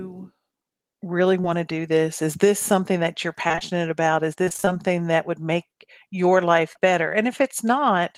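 At 1.41 to 1.46 s comes a short concealed packet loss: about 20 ms of audio never arrived, and the decoder stretched the preceding sound over the hole. It is heard as a brief smear, seen as flattened, repeated harmonics and a smoothed waveform. From 3.48 to 3.63 s, after "this something that you're", and again from 4.45 to 4.69 s, before "that would make your", repeated packet loss (robotic sound) sets in. Four and then six closely spaced gaps, each up to about 20 to 28 ms and covering roughly half of each stretch, are patched one after another. The result sounds choppy, with pieces missing, a striped, smeared spectrogram and a stuttering envelope. A final short concealed loss at 6.73 to 6.77 s, after "would make your life", leaves another brief smudge.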